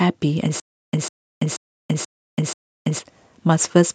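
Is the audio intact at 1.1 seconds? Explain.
No. At 1.1 seconds the speech is caught in a stutter with silent gaps that runs from 0.60 to 2.99 s. A 150 ms fragment plays, then about 333 ms of dead digital silence follows, and the cycle repeats every 483 ms, five times in all. This is likely a stalled stream replaying its last buffer on each retry, so the speech that belonged there is lost. The gaps and their strict regular timing set it apart from ordinary dropouts.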